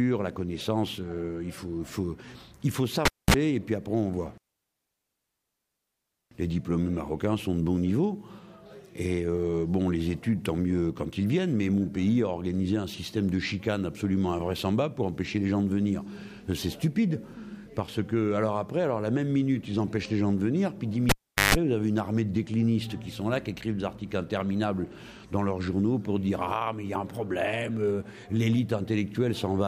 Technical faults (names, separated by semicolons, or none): cable pulled and plugged in